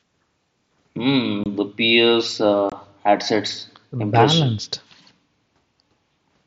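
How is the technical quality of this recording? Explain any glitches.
The recording has two brief dropouts in the speech, both from one kind of fault, heard over the light graininess of the mSBC headset codec.

Unconcealed Bluetooth headset packet loss occurs at 1.44 to 1.46 s and again at 2.70 to 2.72 s. Each time, about 22.5 ms of voice data was lost between headset and phone, which fits roughly three lost headset packets. Silence or an idle pattern took its place instead of filling the gap, so the speech has a sharp-edged hole that can click at its boundaries.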